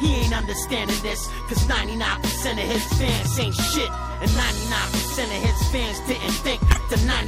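From the start and through the whole clip, the audio has plainly audible damage of the kind MP3 compression leaves, likely from encoding at a low bitrate, which fits roughly 64 kbps. With too few bits, the encoder drops weak spectral lines. Those lines flicker in and out from frame to frame, so the sound comes across watery and swirling, with smeared attacks.

From 6.69 to 6.77 s, a corrupt frame decoded produces a short burst, spanning what sounds like a few consecutive frames. Flipped bits in the compressed data gave the decoder wrong gains or misread codes, and it played them regardless. Energy lands at frequencies where it does not belong for about 80 ms. It is heard as a chirp, blip or burst of noise peaking at around -10 dBFS.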